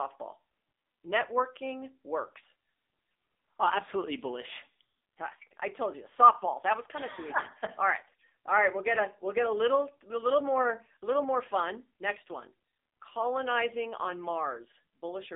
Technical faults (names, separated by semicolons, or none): AMR narrowband mobile codec